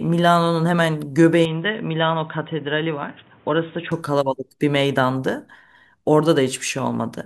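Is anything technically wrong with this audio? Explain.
Yes. From 1.45 s to 3.92 s the speech turns dull and boxy, with nothing above 3.8 kHz, about 5 dB quieter, and carrying a new noise floor roughly 30 dB down. This is likely an input switched to a poorer device. Unlike a plain filter change, the noise and level shift with it.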